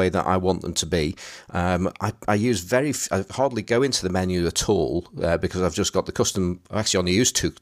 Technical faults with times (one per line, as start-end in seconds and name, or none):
none